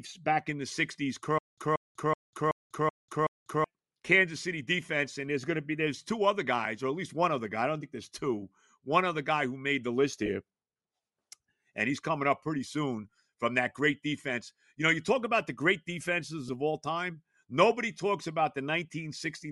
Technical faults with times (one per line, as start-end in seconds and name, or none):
0.00-19.52 Bluetooth LC3 compression
1.38-3.64 stutter with silent gaps
10.26-10.28 lost LE Audio frames
16.48 lost LE Audio frames